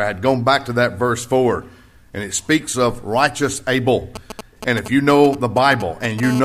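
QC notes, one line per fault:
4.16–6.20 s, GSM signalling bursts: galloping groups of ticks and short 217 Hz buzzes, around 10 dB below the signal, from a nearby 2G phone's radio bursts rectified in the audio circuit.
6.23–6.40 s, GSM phone buzz: steady, raspy 217 Hz buzz rich in harmonics, about -10 dB relative to the signal, as the phone transmits in bursts 217 times a second in call mode.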